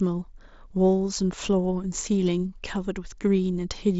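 Speech clip with no technical faults to report.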